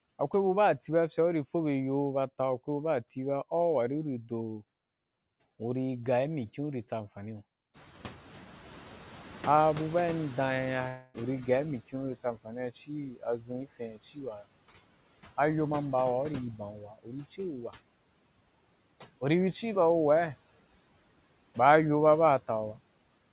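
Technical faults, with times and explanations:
Throughout: noise suppressor artifacts. The suppressor turns down every band it judges to be steady noise, by about 17 dB, deciding afresh on each short frame. The background therefore dips in the pauses and swells back under the speech. The whole clip also carries the band limit of the call path, with nothing above 4 kHz.
7.73 to 11.80 s: noise suppressor catching up. Just after "tsa amfani iyo", the room noise jumps by about 16 dB. The suppressor's noise estimate still reflects the quieter room. The louder noise therefore passes with little reduction at first and only sinks gradually as the estimate adapts. That takes about 4.1 s, after which the noise is cut by about 13 dB. You hear a noisy stretch that slowly quietens rather than a sudden clean-up.
10.88 to 11.16 s: long network dropout. For about 0.26 s the real audio is replaced by a smeared continuation of the preceding sound, a buzz or hiss that fades rather than dropping to silence. 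This is likely packets lost in the network, with the receiver concealing the gap. When the audio resumes, that quarter-second of the original is simply gone. It falls inside the noisy catch-up stretch.
13.11 to 14.19 s and 16.58 to 17.39 s: speech cut by the noise suppressor. In each span the suppressor mistakes parts of the speech for background and turns them down along with it. The drop reaches about 16 dB in the first span and about 17 dB in the second. Roughly 0.4 s and 0.3 s of speech are affected. Soft consonants and word endings there sound swallowed or faint.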